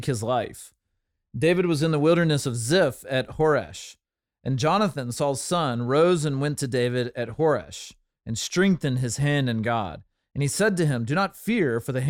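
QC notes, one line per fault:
No fault can be heard anywhere in the speech. There is nothing to log for it.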